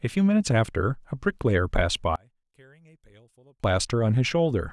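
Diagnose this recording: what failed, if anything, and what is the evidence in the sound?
From 2.16 s to 3.64 s the speech suddenly collapses to a faint trace, about 34 dB below the surrounding level, then returns at full strength. That deep, broadband drop with a faint residue is the signature of one channel inverted, which likely comes from a polarity swap in the analogue wiring, such as reversed conductors on one leg. When the two nearly identical channels are summed to mono, the centred speech cancels and only their small difference remains.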